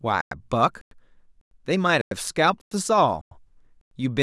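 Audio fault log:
0.21–0.31, 0.81–0.91, 1.41–1.51, 2.01–2.11, 2.61–2.71, 3.21–3.31 and 3.81–3.91 s, gap between chunks: the speech arrives in half-second pieces with 100 ms of dead silence wedged between each, so you get hard-edged holes on a steady 0.6 s beat. The sound isn't smeared, just chopped up at every join.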